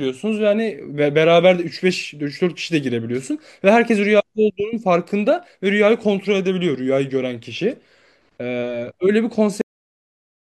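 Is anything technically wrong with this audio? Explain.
Yes. The speech has a cut-off end at 9.61 s. The final buffers of audio were never written out or played, so the stream stops partway through a sound rather than finishing it. At 9.61 s the speech halts abruptly, with no natural decay or trailing off, and drops straight to digital silence that lasts the remaining 0.94 s. The sound is chopped off mid-utterance.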